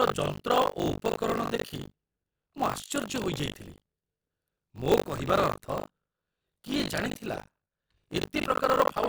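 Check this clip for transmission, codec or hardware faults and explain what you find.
There is one fault, buffer tearing, present throughout the speech. Writer and hardware reader have slipped, so roughly a third of each buffer replays audio from about 70 ms earlier. Hard joins cause a robotic 50 Hz buzz whenever speech sounds.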